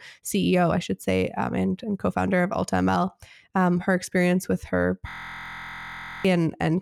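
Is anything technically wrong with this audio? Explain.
Yes. From 5.09 s to 6.25 s the speech breaks into a system hang loop. The driver or host stopped supplying new audio while the hardware kept replaying the same ring buffer. A 23.22 ms slice, which fits a 1024-sample buffer, repeats 50 times at 43.1 Hz and is heard as a hard, steady buzz. About a second of speech is lost. A waveform shows an identical block tiled end to end, and a spectrogram shows evenly spaced horizontal harmonic lines at multiples of 43.1 Hz.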